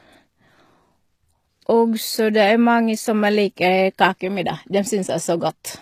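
From start to finish the speech carries plainly audible coding damage, most likely HE-AAC compression at a low bitrate, something around 24 kbps. The treble above the core band is rebuilt by copying lower bands upward rather than coded directly, so s sounds come out gritty and metallic instead of crisp, with harmonics that don't quite line up. Above roughly 14.9 kHz there's nothing at all.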